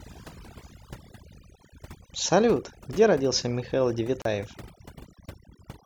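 From the start, the speech carries overdone noise removal. A noise reduction stage was set far too hard. It pushes individual frequency bands down or off whenever they sit near its noise estimate. Quiet parts of the voice fall below that line and vanish with the noise. The background drops and breaks up into twinkling specks. This lasts for the whole clip.

At 4.22 s the sound cuts out. It stays silent until 4.25 s, a gap of 35 ms. Then it resumes. This is likely a Bluetooth stall. Interference held back packets on the wireless link. The headphones' buffer emptied before the resent packets arrived, so playback paused. The speech picks up again right after the gap. The break is short but clean, a sudden hole in the audio rather than a fade.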